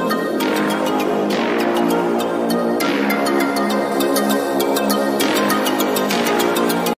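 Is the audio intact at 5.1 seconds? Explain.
No. From 3.92 s to the end, pre-emphasis was left on: the treble lift of the CD 50/15 µs curve never got its matching de-emphasis cut, so 10 kHz sits about 8 dB hot against 1 kHz, making things thin, bright and sibilant.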